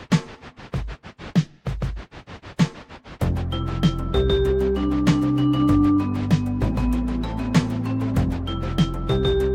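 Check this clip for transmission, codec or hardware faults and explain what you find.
Nothing stood out on listening to this clip.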